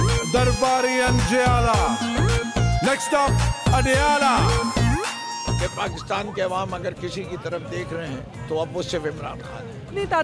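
No technical faults can be heard anywhere in the recording, and the signal keeps a steady, unbroken character throughout.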